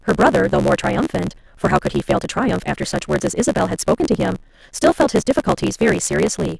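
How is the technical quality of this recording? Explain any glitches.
The technical quality is poor, because a block size mismatch (truncated) runs through the whole recording. Throughout the speech there's a steady 75 Hz buzz, and everything plays 1.6 times too fast while the pitch stays about normal. One stage is writing bigger blocks than the next one reads, which fits 512-sample blocks going in, so the tail of every block gets chopped off. Those regular cuts make the buzz, and skipping that audio is what speeds things up.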